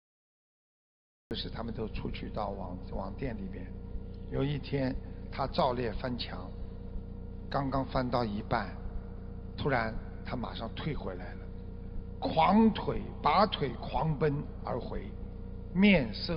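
For the first 1.31 s there is dead digital silence, and then the sound bursts in already underway, with no attack or fade-in. This is a cut-off start: capture or streaming began late, so the opening of the sound was lost.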